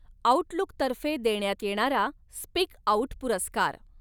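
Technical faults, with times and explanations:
No technical faults can be heard in this recording.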